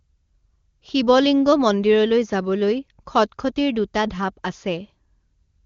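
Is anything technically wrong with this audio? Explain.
No, nothing is wrong: the speech is band-limited at 7 kHz and carries at most a faint coding texture, which fits the AMR wideband (HD Voice) codec running at its top rate of about 23.85 kbit/s.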